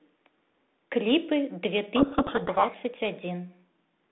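From 1.96 to 2.76 s there's a codec payload misread: the G.726 code words arrive with their bit order flipped relative to what the decoder expects, so it rebuilds the wrong sample differences and the speech drowns in harsh, gritty distortion until the packing lines up again, back to the light 32 kbit/s G.726 sound.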